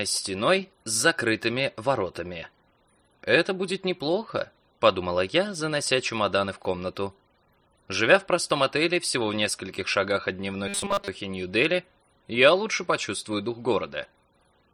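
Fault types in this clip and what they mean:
Robotic sound from repeated short buffers: audio likely arrived too seldom, so the last slice, which fits a 5 ms buffer, was replayed through roughly 70 percent of 10.68 to 11.08 s. The real sound was skipped and replaced by a rigid, metallic 200 Hz buzz.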